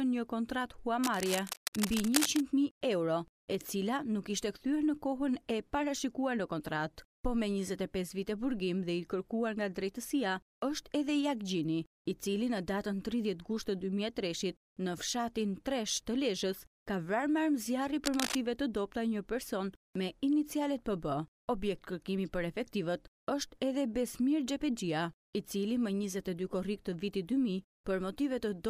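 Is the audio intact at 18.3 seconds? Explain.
No. From 18.04 to 18.41 s there is cable scratch noise, most likely from a worn cable, connector or control being moved so that its contact resistance fluctuated rapidly. Those fast resistance changes inject dense, irregular bursts of noise into the signal path. For that short stretch, a bit over a third of a second, a scratchy, rustling layer sits only a few decibels below the audio, audible over it.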